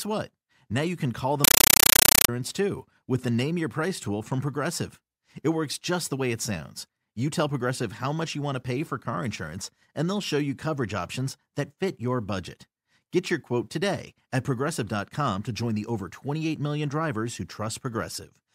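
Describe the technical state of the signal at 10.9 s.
At 10.9 s the speech signal is intact, with no audible dropout, distortion, or other technical fault at that moment.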